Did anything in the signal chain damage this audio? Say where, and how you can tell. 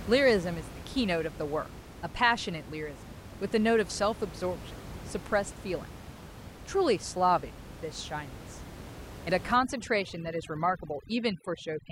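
Yes. Overdone noise removal in the call processing stage takes over from 9.55 s to the end at 11.91 s. The room noise, about 15 dB below the speech, collapses to near silence with twinkling specks. Unlike codec artefacts, the damage tracks the noise floor: bands near it are gated out, quiet speech detail included.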